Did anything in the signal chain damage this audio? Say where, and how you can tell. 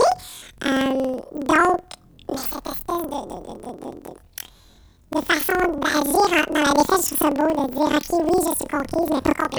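Yes. From start to finish the speech sounds an octave high with a steady flutter at about 21.5 Hz, yet the overall pace is normal. That points to planar audio read as interleaved at the sample-format conversion stage. Each block of roughly 46 ms, which fits a 2048-sample block, holds all of one channel and then all of the other. Read as alternating pairs, each half plays at double speed, left then right, so every block sounds twice.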